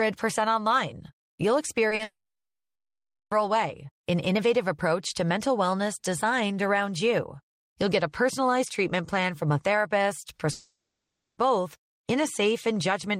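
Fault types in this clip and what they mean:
Short concealed packet loss: Brief gaps where audio arrived too late and the receiver patched them by extending the preceding sound, then blending back into real signal. Here two patches sit close together, about 20 ms at 1.89 s and about 40 ms at 1.95 to 2.01 s, heard as a quick smear or wobble. Unlike a dropout, the speech carries on; only a tiny slice is disguised.
Long network dropout: Stretches where no audio arrived, so the receiver kept the last sound going as a fading buzz or hiss and then fell to silence. This is the likely cause of two breaks: 2.03 to 3.33 s, with about 1.2 s of silence, and 10.51 to 11.39 s, with about 0.61 s of silence. Speech resumes later with the missing part gone, unlike the brief patched smears.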